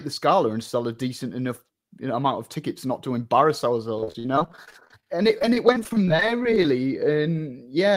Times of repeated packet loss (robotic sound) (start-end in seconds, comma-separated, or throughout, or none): 3.98-6.65